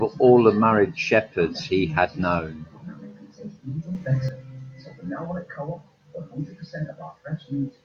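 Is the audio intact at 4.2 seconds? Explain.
No. From 3.95 to 4.29 s the speech and its background noise leap up together by about 8 dB and then drop back, a sudden gain jump. The likely cause is digital gain switched between adjacent samples with no ramp to smooth it.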